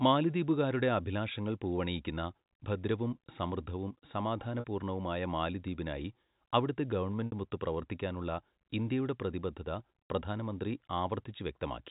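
At 4.60–4.64 s, after "പൂവണിയിക്കുന്ന ഭദ്രവും സമൃദ്ധവും സമാധാന", and again at 7.27–7.32 s, after "സമാധാന പൂർണ്ണവുമായ മാലിദ്വീപിനായി അവിടത്തെ", there is packet loss with pitch repetition. About 40 ms and 60 ms of audio went missing, and the receiver looped the last pitch period to fill each gap. The first gap gives a brief, buzzy held tone; in the longer second gap the repeated tone fades out into silence before the speech returns with a short cross-fade.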